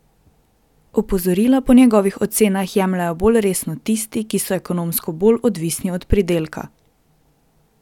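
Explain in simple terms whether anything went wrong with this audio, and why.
Nothing went wrong technically: the speech recording comes through steady and intact, with no technical problems to point to anywhere along its length.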